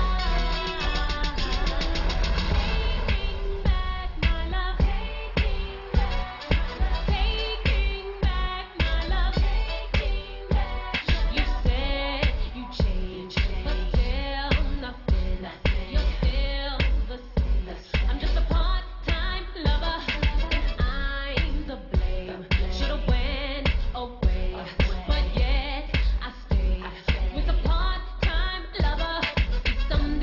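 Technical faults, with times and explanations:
No technical faults detected.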